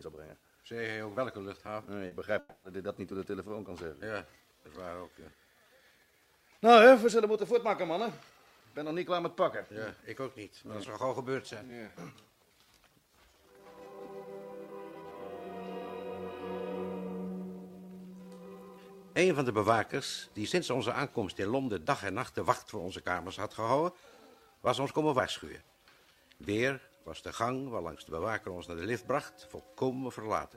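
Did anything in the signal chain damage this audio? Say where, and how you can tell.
Yes, at the network stage. Around 2.07 to 2.14 s there is a short concealed packet loss: about 40 ms of audio never arrived in time, and the receiver papered over the hole by extending the preceding sound, then cross-fading back into the real signal. It is heard as a brief smear or wobble. On a spectrogram the sound runs on unnaturally steady and slightly blurred for that instant. The waveform shows no gap, just a stretch of overly regular continuation.

Shortly after, from about 2.39 to 2.66 s, there is a long network dropout, likely caused by the stream stalling for roughly a quarter of a second. Around 240 ms of audio is missing and was replaced by a synthetic continuation that turns into a fading buzzy hiss, followed by about 10 ms of near-silence before the real sound resumes further on. On a spectrogram this looks like smeared, decaying energy with no new onsets. 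The waveform shows a tapering envelope and then a flat sliver.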